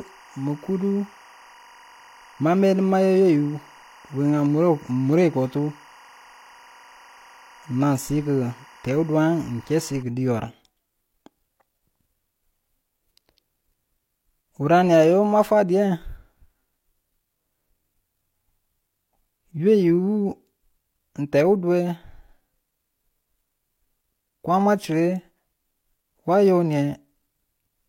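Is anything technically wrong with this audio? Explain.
Yes. From 0.0 to 10.03 s a steady chirping warble sits behind the speech, roughly 30 dB below it. This is timecode bleed: linear timecode from an adjacent track or cable leaks in, its square wave flipping between pitches near 1 and 2 kHz, with a rhythm that points to 23.976 frames-per-second code.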